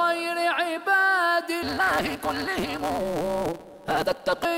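From 1.62 s to 4.45 s a steady buzz at 172 Hz sits on the sound, which rushes ahead at 1.88 times normal speed while keeping its timbre. This is a block size mismatch (truncated): the next stage reads shorter blocks, which fits a 256-sample read, and each block's tail is discarded.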